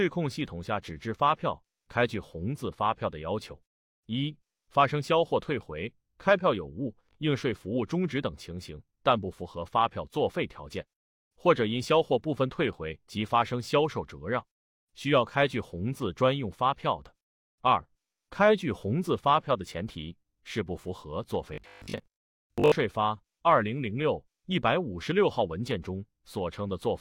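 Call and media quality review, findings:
Robotic sound from repeated short buffers, 21.54 to 22.76 s: rigid metallic buzz at 50 Hz, the underlying sound only loosely tracked. Likely a playout buffer underrun. The last 20 ms block is replayed for most of the span while fresh audio is skipped.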